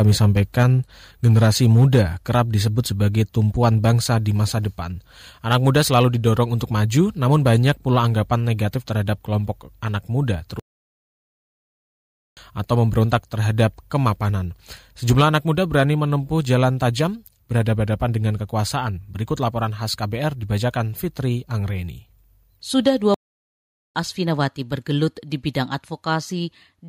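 The speech opens with microphone overload from 0.0 to 3.9 s, ending just before "di masa depan". The loudest peaks sit about 3 dB past the converter's limit, and their tops are sheared flat. A small share of the audio, around one or two percent, is clipped. It sounds harsh and crackly on the strongest syllables. The likely cause is input gain set too high for the converter.

At 0.63 s the level drops suddenly by about 3 dB. Voice and background fall together in one step. This is the microphone volume stepped down, likely by call software reacting to the clipping.

Overload returns from 5.51 to 7.71 s, between "di masa depan" and "pula anggapan negatif terhadap". Peaks run about 4 dB over, and under one percent of the audio is clipped. The likely cause is again a hot input.

From 12.72 to 13.97 s the overload is mild. Peaks exceed the limit by about 1 dB, and only a tiny fraction is clipped. 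Too much input gain is the likely cause.

The next overload runs from 15.09 to 16.54 s, just before "tajam berhadapan dengan kekuasaan". Peaks go about 5 dB over, with roughly one percent clipped. The distortion is gritty. The likely cause is excessive mic gain.

At 15.21 s, inside that stretch, the level steps down again by about 3 dB. The drop is abrupt and takes the background with it. This microphone volume step-down likely came from automatic gain control cutting the input.

A short overload burst at 22.87 s lasts only a few hundredths of a second. Peaks go about 2 dB over, and within that moment a few percent of the audio is clipped. It sounds like a brief crackle, likely from peaks overdriving the input.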